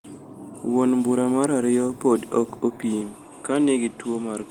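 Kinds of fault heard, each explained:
Input switched to a poorer device: from 3.01 s, just after "mar ariyo podi ok", the sound turns duller and about 5 dB quieter with nothing above 11.2 kHz, likely a change of microphone.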